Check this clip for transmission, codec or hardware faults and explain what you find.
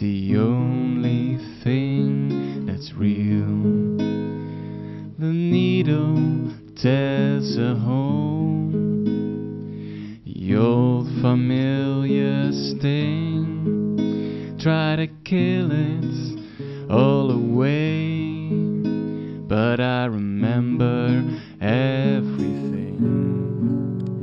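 One fault, right at the end: imaging from linear upsampling, running from 22.37 s through to the finish at 24.23 s. The top of the band sounds dulled, with a faint metallic shimmer sitting above it. That pattern fits audio at 12 kHz being raised to 44.1 kHz by joining samples with straight lines. Such a crude filter leaves mirrored copies of the spectrum, here first appearing between 6 kHz and 12 kHz, roughly 45 dB down.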